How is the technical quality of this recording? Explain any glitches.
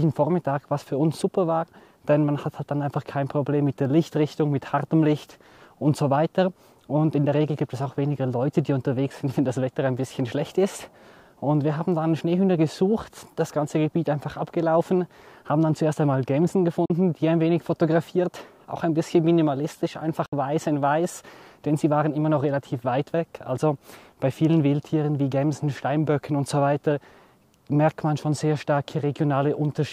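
The recording has two brief gaps where the sound cuts out entirely. The first runs from 16.85 to 16.90 s and the second from 20.26 to 20.33 s, with about 41 ms and 61 ms of material missing. The likely cause is a Bluetooth dropout: packets failed to arrive at the headphones in time and were discarded, leaving silence. The lost spans fit two and three packets respectively. Each hole has abrupt edges or a fade of a few milliseconds, and the sound resumes further along, as though it kept playing underneath.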